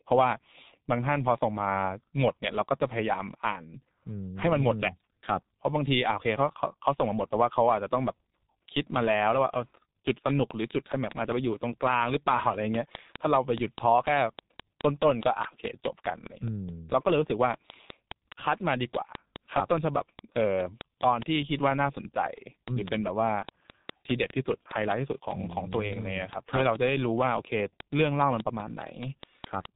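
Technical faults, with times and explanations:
Throughout: G.723.1 codec. The speech comes across muffled and hoarse, with nothing above 3.8 kHz and consonants smeared together. The heavy damage fits a very low bitrate of around 6.3 kbit/s, where the coarse frame-by-frame voice model can't keep up with fast changes.
10.30 to 29.66 s: train of clicks. A steady ticking runs to nearly the end of the clip, evenly spaced at 4.86 clicks per second, around a hundred in all. The clicks peak about 20 dB above the speech and carry on through the pauses. Something is injecting a repeating pulse, likely interference from nearby equipment or a faulty connection or power supply.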